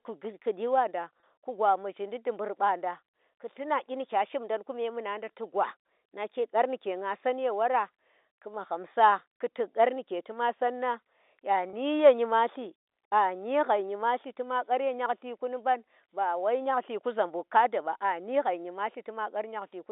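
At 1.2 s and again at 11.7 s there's a brief packet loss with pitch repetition. Roughly 30 ms of the speech drops out each time, which fits a single lost packet, and the receiver fills it by looping the last pitch period, so you hear a quick buzzy hold before the narrowband G.711 phone-line sound carries on.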